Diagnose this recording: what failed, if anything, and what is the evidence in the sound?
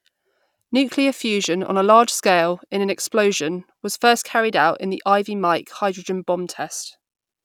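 Nothing in the speech recording points to a failure at any stage of the chain, from capture through to playback.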